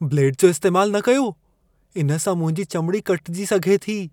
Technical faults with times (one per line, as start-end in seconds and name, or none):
none